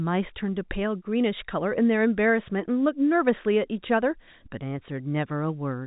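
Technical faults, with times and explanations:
No technical faults detected.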